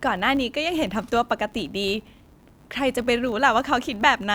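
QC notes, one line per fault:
Throughout: filter restarted on every block. The filter's internal state is cleared at each block boundary, so every block starts from silence and opens with a small transient. These transients repeat at 100 Hz, which points to processing blocks of about 10 ms, and they form a steady buzz laid under the speech. The buzz rises and falls with the level of the speech because each transient scales with the signal entering the new block.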